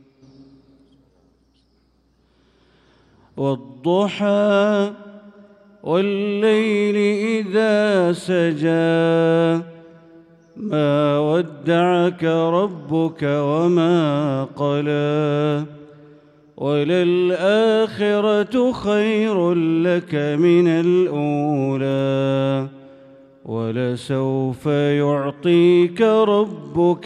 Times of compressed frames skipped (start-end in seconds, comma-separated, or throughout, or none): none